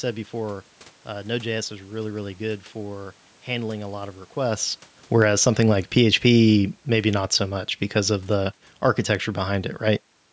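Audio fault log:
5.05–10.14 s: automatic gain falling. The automatic gain control, having judged the input too loud or its background noise too strong, lowers its gain by about 7 dB over these five seconds, so the voice and the room noise behind it sink together.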